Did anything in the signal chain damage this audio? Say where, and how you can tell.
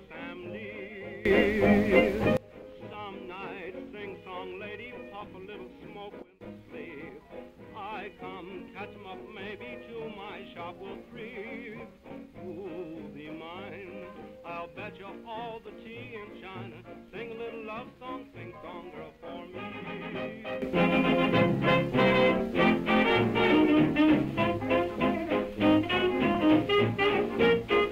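Yes. A digital gain stage changed its setting from one sample to the next with no ramp, most likely in the processing chain after conversion. The result is a sudden gain jump, three times: up about 21 dB from 1.25 to 2.37 s, down about 14 dB from 6.22 to 6.41 s, and up about 12 dB from 20.62 s to the end. The background noise steps with the sound each time, which shows a digital scaling rather than a change at the source.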